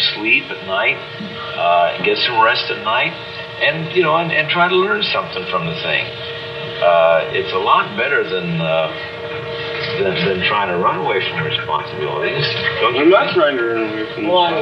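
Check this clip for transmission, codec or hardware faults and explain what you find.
No transmission, codec or hardware faults can be heard anywhere in the signal.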